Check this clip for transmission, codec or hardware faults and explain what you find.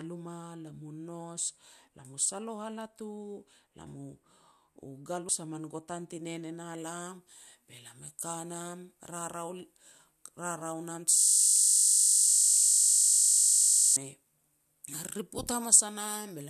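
Three kinds of trouble turn up here: two frame dropouts, treble boost over the back half, and a stretch where playback locks up into a loop.

Compressed frames skipped: At 5.28 s, just before "a min gutan ti", the sound jumps forward by roughly 50 ms. At 12.27 s it jumps again by about 70 ms. Whole coded frames never got decoded, either missing or rejected as corrupt, so the decoder skipped straight ahead. The gaps fit two and three frames of about 24 ms each.

Pre-emphasis left on: From 6.78 s to the end the treble is pushed way up, about 10 dB at 10 kHz relative to 1 kHz. The shape matches the 50 µs FM curve. The highs were boosted for transmission and the matching de-emphasis on the receiving side never got applied. The speech turns thin and brittle, and the sibilants come out hissy and sharp.

System hang loop: Between 11.18 s and 13.96 s, a single 20 ms chunk of audio repeats itself around 140 times. 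The machine or driver stalled, but the sound hardware kept replaying the same ring buffer. A loop that short doesn't read as a stutter. It becomes a steady 50 Hz buzz, because it repeats 50 times a second. The 12.27 s frame skip lands inside this frozen stretch.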